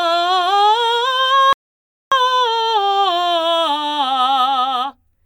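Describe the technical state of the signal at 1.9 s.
At 1.9 s you're sitting right in the middle of an audio dropout to silence, which runs from about 1.53 s to 2.12 s, so roughly 0.59 s of the music just vanishes. The signal goes silent, with no room tone or noise floor underneath, and then the music comes back mid-flow. That silent gap most likely means the input was lost for a moment while the recorder kept writing silence.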